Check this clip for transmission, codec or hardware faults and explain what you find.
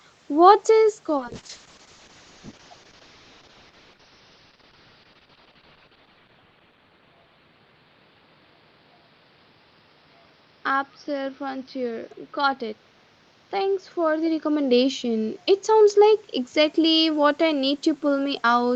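A call bitrate drop runs from 1.19 s to 17.41 s. The encoder, starved of bits, codes coarsely, which fits a fall from 32 kbps to around 7 kbps. The top narrows from 8 kHz to 6 kHz, and the sound turns rough and watery, worst for 4.77 s. Unlike a plain level dip from movement, the texture degrades, not just the loudness.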